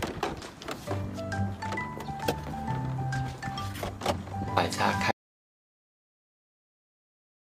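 At 5.12 s an audio dropout to silence, likely a lost input, cuts everything to the end: flat waveform, blank spectrogram.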